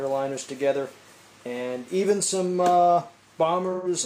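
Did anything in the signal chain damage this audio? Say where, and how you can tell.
Yes. AAC frame loss with concealment, 3.72 to 3.88 s, at the codec stage: about 128 ms, roughly three frames, were rebuilt from the last good spectrum, leaving a smeared, noisy or phasey patch.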